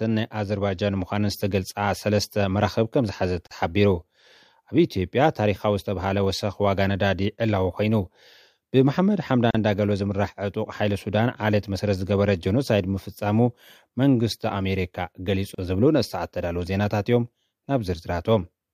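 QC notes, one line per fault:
3.47–3.51 s, 9.51–9.55 s and 15.55–15.58 s: gap at a join of encoded pieces. The continuous sound drops out for about 40 ms, then twice for about 37 ms. The breaks recur every 6 s, so the audio was encoded in separate pieces and butted together untrimmed. Each join keeps the encoder's start-up delay and the padded final frame as silence. The edges are smeared by the codec. The sound resumes where it stopped.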